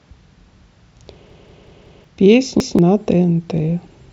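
At 1.3 s a repeated buffer begins. New audio failed to arrive, so the device replayed its last block. That block is about 186 ms long, which fits an 8192-sample buffer. It plays four extra times, until 2.04 s. The same fragment of speech loops with a hard join at each repeat. It sounds like a stutter. Roughly 0.7 s of speech is lost. At 2.6 s it happens again. One extra play runs to 2.79 s, losing about 0.2 s.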